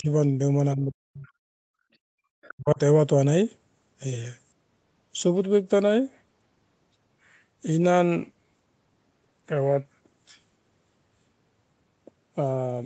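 From 0.0 to 0.09 s, and again from 0.75 to 1.27 s, the echo canceller likely could not separate the talker from loudspeaker echo while both sides spoke, so it turned the speech down. This is speech suppressed in double talk. The first dip is brief and shallow, around 15 dB. The second pulls the speech down by roughly 40 dB for nearly half a second, close to a dropout.

At 1.27 to 1.31 s, the other side's voice is leaking through, likely residual echo the canceller failed to remove from the microphone. It comes through as a faint scrap about 40 dB below the speech.

From 1.57 to 1.82 s, the canceller clamped the microphone hard while the loudspeaker played. This is background gated by the echo canceller: the room sound falls by about 40 dB for a quarter second, then returns when the gate releases.

At 2.42 to 2.54 s the leak returns, louder this time at about 25 dB below the speech, so a fragment of the far voice comes through. 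Overlapping it, from 2.53 to 2.79 s, double-talk suppression strikes once more, dropping the speech roughly 40 dB for about a fifth of a second.

The 8 kHz upper limit set by the 24 kbps Opus call path is expected behaviour, not a fault.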